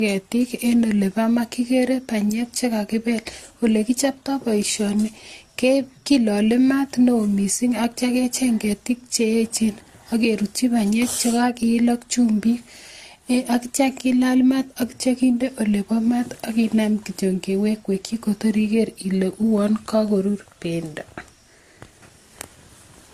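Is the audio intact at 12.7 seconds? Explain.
No. At 12.7 seconds the speech carries the damage of transcoding between lossy codecs, present across the whole clip. The mixed artefacts point to a chain like HE-AAC, then Opus, then AAC-LC at modest bitrates. Each later encoder likely spent bits re-coding the earlier one's errors and added its own. The result is the different codecs' artefacts heard together, with nothing above about 14 kHz. A spectrogram shows a flat ceiling near 14 kHz and patchy, blotchy energy beneath it.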